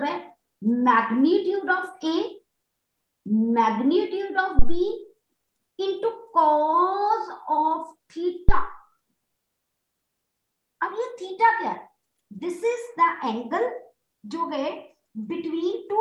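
At 4.59 s and again at 8.49 s there's a phantom power thump, a supply step hitting the input's coupling capacitors, giving a deep thud peaking around -4 dBFS that dies away within roughly 50 to 60 ms.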